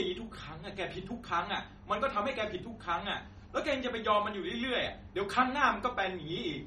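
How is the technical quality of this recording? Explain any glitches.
The quality is noticeably degraded throughout by MP3 compression. Nothing remains above 13.2 kHz, and the sound is watery and swirly, which fits a low bitrate around 32 kbps. Starved of bits, the encoder likely cut the treble and zeroed weak frequency lines frame by frame. A spectrogram shows a flat ceiling at 13.2 kHz and flickering gaps below it.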